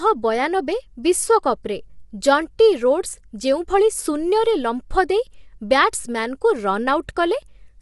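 Throughout the speech, low-delay AAC compression is plainly audible, likely from AAC-ELD at a rate near 32 kbps. Voiced sounds turn rough and grainy, with noise filling the gaps between harmonics. A spectrogram shows smeared harmonic lines and nothing above 11.6 kHz.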